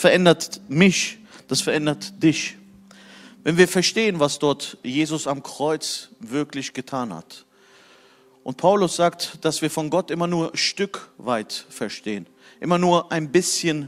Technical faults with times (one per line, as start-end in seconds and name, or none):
none